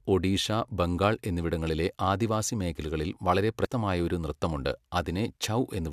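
A short glitch cuts into this speech recording at 3.65 to 3.67 s, a brief blip lasting about 20 ms before the audio carries on. It comes from damaged data in the compressed stream: a stretch of the encoded file was corrupted, so the decoder could not make sense of the frames at that point, lost its sync, and scanned forward for the next valid frame header before normal playback resumed.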